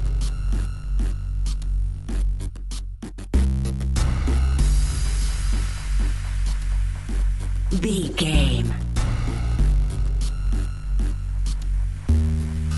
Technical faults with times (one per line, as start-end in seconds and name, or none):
none